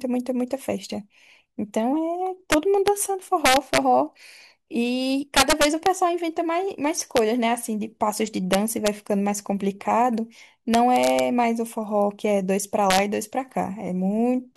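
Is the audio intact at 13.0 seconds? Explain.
No, not quite. Right around there, from 12.90 to 12.98 s, there's an integer overflow. The loudest speech peaks got pushed about 1 dB past the largest value the integer format can hold, and instead of being clamped they wrapped around to the opposite extreme. Each of those peaks flips across the full range, so you hear a short, violent crack lasting about 80 ms, far harsher and sharper than ordinary clipping.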